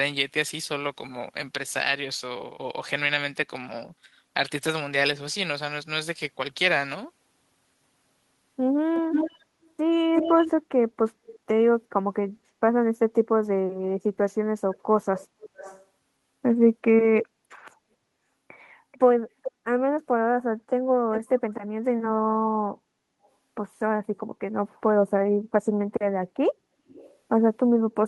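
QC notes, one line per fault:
8.94–11.39 s, 14.75–15.86 s, 17.20–17.26 s, 18.92–19.51 s, 21.14–21.40 s, 23.24–23.28 s, 26.88–27.17 s: echo leak. A delayed copy of the speech returns about 356 ms late in the first run, about 436 ms through 19.51 s, and about 365 ms after that. It is loud at first, close to the speech level, and later mostly faint, down to barely audible at 23.24 s. This is likely a far-end loudspeaker echo that the echo canceller did not fully remove.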